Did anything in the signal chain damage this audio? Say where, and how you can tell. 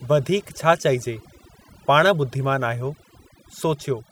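Yes, overdone noise removal in the processing stage, running right through the speech. The background between phrases drops to near silence with little twinkling specks, because the suppressor is cutting individual frequency bands near its noise estimate and taking quiet voice detail along with them.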